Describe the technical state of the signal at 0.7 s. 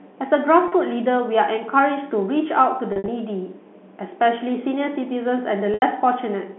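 Packet loss with pitch repetition from 0.68 to 0.72 s: about 40 ms went missing, which fits two 20 ms packets, and the receiver repeated the last pitch period, so the speech briefly holds with a slight buzz over the band-limited telephone sound.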